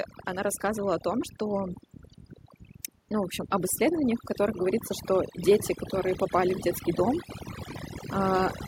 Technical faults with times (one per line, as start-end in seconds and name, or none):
0.00-8.68 overdone noise removal
0.26-1.83 automatic gain rising
3.09-5.38 automatic gain rising